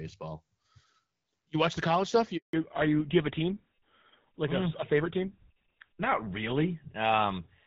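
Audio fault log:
2.37 to 2.53 s, handover gap. Right after "watch the college stuff" the speech drops out for 160 ms. The call was switching networks and no speech frames arrived meanwhile. The sound fades within tens of milliseconds, then silence until the new link carries audio again.
2.53 s to the end, fallback to narrowband. From here nothing sounds above 4 kHz. The call left AMR wideband at a rate that fits 12.65 kbit/s for GSM full rate. The HD band is cut off, so speech turns dull and rougher.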